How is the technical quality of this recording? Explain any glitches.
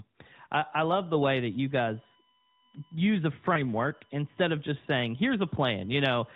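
One glitch affects this narrowband telephone speech. The spectrogram shows an empty band above 4 kHz with light codec colouring, which fits AMR-NB at 12.2 kbps.

Lost AMR speech frame, 3.54 to 3.65 s: one 20 ms frame failed, so the decoder repeated earlier pitch and vocal-tract settings at falling gain. It is audible as a brief warbling dip. The waveform shows an amplitude sag and the spectrogram shows smeared, repeated harmonics.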